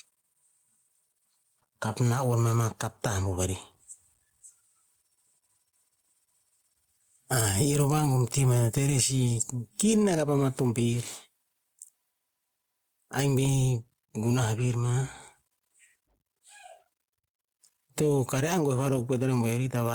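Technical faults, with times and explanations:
Throughout, gain pumping: the level swings by around 10 dB. This squashes loud and soft parts together, likely from gain set far too high with a fast limiter clamping down.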